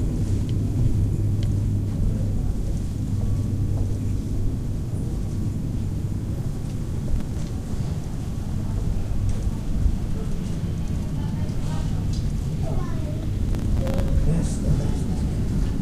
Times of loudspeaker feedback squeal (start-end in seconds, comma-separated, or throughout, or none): none